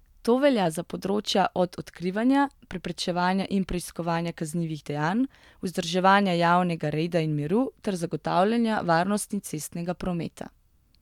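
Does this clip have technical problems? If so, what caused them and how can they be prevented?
No, no technical faults are audible in this speech clip, so there is nothing to trace or prevent.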